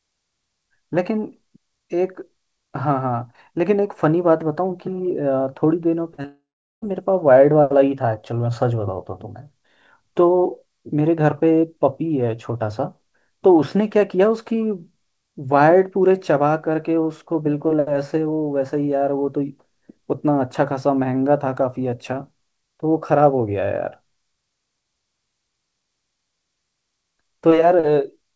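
At 6.14 to 6.20 s and again at 6.22 s there is short concealed packet loss. About 40 ms and then about 20 ms of speech missed the decoder's deadline, and the receiver extended the preceding sound across each gap. This leaves two brief smears just before a longer break, all heard through a G.722-style call path that carries nothing above 8 kHz.

From 6.26 to 6.84 s comes a long network dropout, likely caused by no audio arriving for just over half a second. The receiver stretches the last sound into a buzz or hiss that fades away, and for about the final 0.39 s only silence remains. The speech then resumes with that stretch missing.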